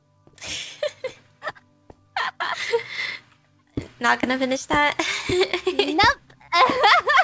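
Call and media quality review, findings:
No faults found; band-limited to 8 kHz, consistent with a wideband G.722 call path at 64 kbps.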